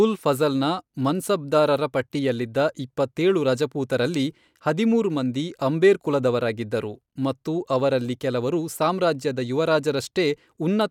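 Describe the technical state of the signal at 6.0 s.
At 6.0 s the speech signal is intact, with no audible fault at that moment.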